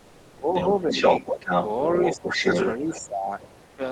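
From 0.0 to 3.05 s a second voice runs underneath at roughly the same loudness as the main speech; this is the other side's voice leaking through, likely loudspeaker echo the canceller failed to remove.

While that voice overlaps, the main speech dips and thins: from 0.26 to 1.27 s (about half a second affected in all, up to about 15 dB down), 2.16 to 2.43 s (roughly 0.2 s, about 15 dB), and 2.78 s to the end (up to about 20 dB). This is likely speech suppressed in double talk, with the canceller turning down both voices at once.

From 3.65 to 3.77 s the room background gives way for 120 ms to a smooth, featureless hiss about 2 dB quieter, likely comfort noise in place of the background during a discontinuous-transmission pause.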